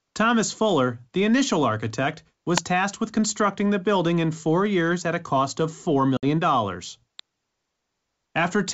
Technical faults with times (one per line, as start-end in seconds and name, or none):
2.57 electrical switching spike
6.17-6.25 packet loss on an ADPCM call
7.19 electrical switching spike